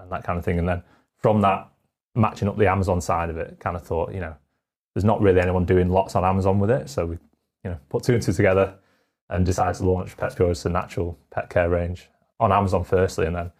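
From 8.70 to 10.34 s, just after "put two and two", the voice turns rough and slightly doubled. This is channel delay (comb filtering): one channel lags the other by about 20 ms, and summing them to mono cuts evenly spaced notches starting near 20 Hz.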